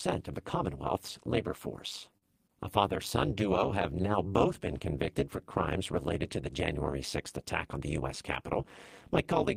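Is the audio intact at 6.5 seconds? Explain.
No. At 6.5 s, as throughout, the speech has a metallic buzz near 200 Hz. This is overlap-add ripple: frames rejoin with uneven overlap gain, dipping about 60 dB each frame.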